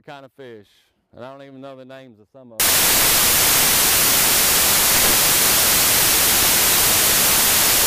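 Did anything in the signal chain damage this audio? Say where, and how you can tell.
Yes. The damage happens at the sample-format conversion stage: from 2.6 s to the end of the clip, the samples are built from the wrong bytes. The original sound gives way to loud, harsh broadband noise that persists without a break. This is what happens when the reader assembles each sample with a byte offset, reversed byte order or mismatched alignment, so the rapidly changing low-order bits land in the high-order positions and dominate every value.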